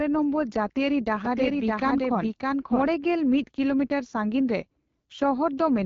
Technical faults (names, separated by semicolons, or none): AMR wideband (HD Voice) codec; doubled audio track